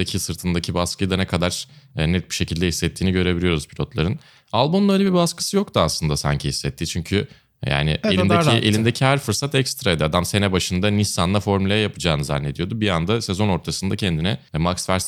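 Nothing in the speech stood out as a technical fault on listening.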